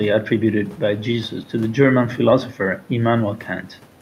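Nothing stood out on listening to this speech clip, with only the room's own background noise audible, sitting about 28 dB below the speech.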